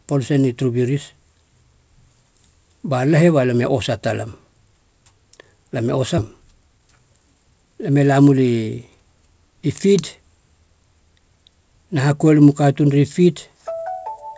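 It's a speech clip carried over what sounds like a call codec, with nothing above 8 kHz, which fits G.722 at 64 kbps. At 6.18 to 6.20 s there's a skip ahead: roughly 0.4 s of audio just vanishes and the two sides butt together with no gap, likely because the jitter buffer overflowed and dumped the backlog. Right after that, from 6.36 to 8.34 s, you get a jitter buffer speed-up. The receiver snips out tiny pitch-period chunks to drain its excess delay, so the speech runs at about 112% speed at the same pitch and sounds a bit rushed, losing around a fifth of a second overall.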